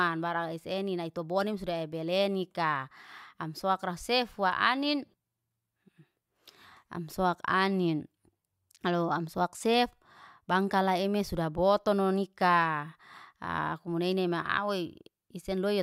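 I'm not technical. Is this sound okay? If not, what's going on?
Yes, nothing in this recording stood out as a problem when I listened to it.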